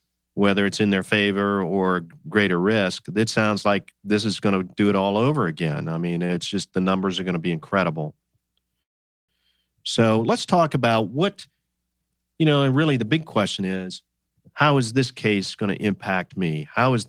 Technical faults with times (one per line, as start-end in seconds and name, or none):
6.15-6.74 repeated stalls (stutter)
8.82-9.30 call audio freeze
13.60-16.89 jitter buffer speed-up